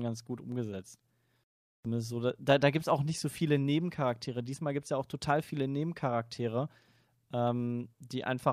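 No faults are present in the recording; the speech comes through without any dropout, distortion, glitch or other defect to report.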